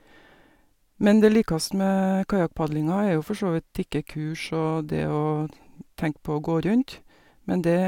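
No technical faults can be heard anywhere in the recording.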